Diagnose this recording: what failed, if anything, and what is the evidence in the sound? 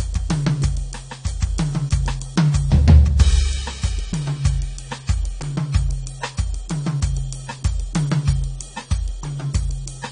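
The fault sits at the codec stage and runs through the whole music clip: nothing is present above 9.7 kHz, and the top end sounds dull, with a smeared, warbling or fizzy texture on sustained material. That points to AAC compression, likely AAC-LC at a low bitrate in the region of 32 kbps. Short of bits, the encoder lowers its cut-off and quantises the remaining spectral lines coarsely, leaving gaps that the ear hears as swirling artefacts.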